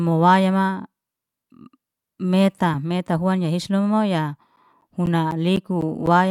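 From 4.56 s to 6.07 s the speech is broken by periodic USB or driver dropouts: every 0.25 s, something stalls the USB bus or audio driver and a short stretch of samples, roughly 10 ms each, is replaced by silence. About seven gaps fall in this span, heard as an even tick or pop rhythm under the voice. On a waveform they appear as narrow flat notches at regular spacing; a spectrogram shows thin vertical gaps flanked by broadband click edges.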